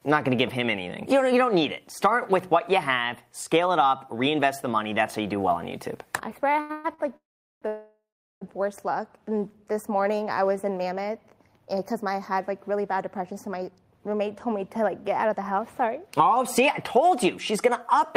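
Repeated stalls (stutter) run from 6.53 to 7.00 s. Packets arrived late, so the jitter buffer emptied four times and the receiver stretched the last sound across each hole, the longest lasting 128 ms. Those fills cover 269 ms, over half the span, so the audio drags and stutters with nothing lost.

A call audio freeze follows from 7.16 to 7.64 s, and another from 7.68 to 8.43 s. Each time the sound hangs, decays, then drops to silence for about 400 ms and 380 ms respectively before carrying on from where it halted. The likely cause is packets held up in transit draining the jitter buffer. The two pauses insert 453 ms and 738 ms of delay without removing any audio.

A jitter buffer slow-down between 9.32 and 9.64 s adds 38 ms by repeating single pitch periods to rebuild a reserve. The sound plays at 90% speed with unchanged pitch, so it is briefly drawn out.

A jitter buffer speed-up from 13.01 to 18.01 s has the receiver trimming short pitch-period pieces to shed excess delay, roughly 0.3 s in all. 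The audio runs at 105% speed at the same pitch, sounding slightly hurried.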